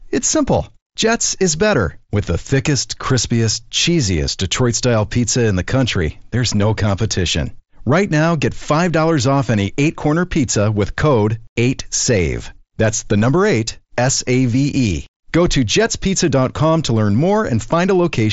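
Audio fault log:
No faults are heard in this speech clip. It has passed through a Bluetooth mSBC headset codec, so nothing reaches above about 7.7 kHz and a light grain sits on the louder passages.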